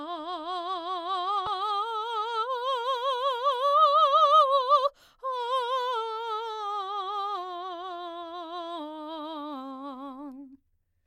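Right around 1.44 to 1.47 s the music gets hit by damaged data in a compressed stream: bad data throws the decoder off, it loses frame sync and hunts for the next header, leaving a quick 30 ms glitch where the music briefly garbles.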